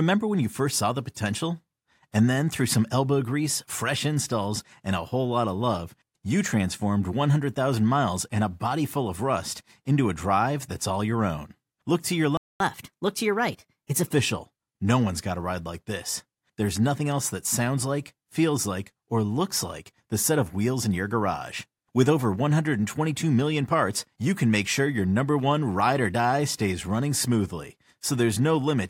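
At 12.37 s, just after "to your", the speech cuts out in a playback stall lasting 230 ms, until 12.60 s. The likely cause is the player running dry of buffered data or its output thread being blocked, leaving silence before the audio resumes where it stopped.

From 12.60 s to 14.14 s there is catch-up at higher speed: the player works through its backlog by resampling at 1.15 times normal rate. Speech sounds hurried and raised by about two semitones, then settles back to normal pitch and pace.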